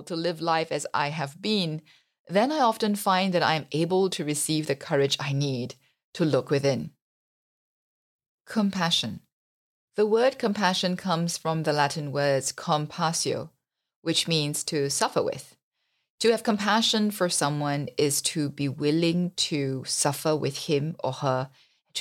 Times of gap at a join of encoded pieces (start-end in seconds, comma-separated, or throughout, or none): none